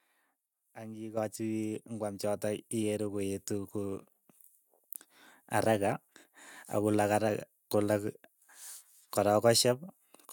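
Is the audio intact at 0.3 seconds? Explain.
Yes, at 0.3 seconds the speech runs intact, with no dropout, click, distortion or other fault heard at that moment.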